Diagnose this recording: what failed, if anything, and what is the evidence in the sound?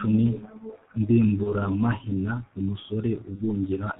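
The codec stage failed. The whole speech clip carries heavy G.723.1 codec damage. Nothing is heard above 4 kHz, so the sound is muffled. Voicing comes out hoarse and consonants smear together. The coder works in 30 ms frames and updates its vocal-tract model slowly. Fast articulation is averaged away. The thinness points to its 6.3 kbit/s mode, which leaves very few bits for each frame.

The network stage failed twice. VoIP packet loss concealed by the speech codec is heard from 1.43 to 1.51 s and from 3.35 to 3.43 s. Each time the sound is stretched into a short buzzy tone or coloured noise that fades. The decoder repeats its last pitch and filter while lowering the gain. Each gap fits a single lost 30 ms frame. The weakness lasts past 30 ms because each decoded frame builds on the one before.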